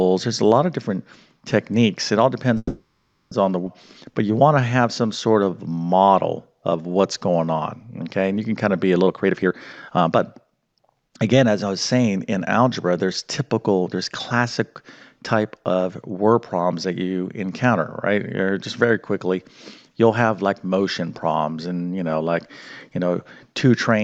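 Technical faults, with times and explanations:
2.57–3.33 s, call audio freeze: playback stalls for about 0.74 s, the last sound stretching into a fading buzz or hiss that drops to silence for roughly 0.41 s, likely from packets held up in transit draining the jitter buffer. When audio resumes nothing is lost, which separates it from a skip.
3.65 s, skip ahead: the sound jumps forward almost seamlessly, roughly 0.4 s of audio dropped and the two sides butted together with only a 10 ms join. Unlike the freeze, there is no stall, just missing material.
4.11–6.12 s and 6.52–8.05 s, jitter buffer slow-down: the receiver repeats single pitch periods to rebuild its reserve, adding 250 ms and then 175 ms, so playback runs at about 88% and 89% speed. Pitch stays put while sounds drag out, unlike a tape-style slowdown.
9.06–11.51 s, jitter buffer speed-up: short pitch-period slices are cut repeatedly to shed excess delay, removing roughly 0.7 s, so the sound runs at about 130% speed and feels hurried. 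Pitch is unchanged, and the cuts are spread out, not a single jump like the skip.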